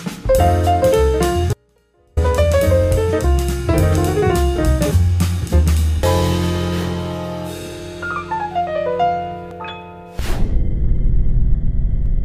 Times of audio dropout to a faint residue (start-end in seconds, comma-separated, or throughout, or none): 1.53-2.17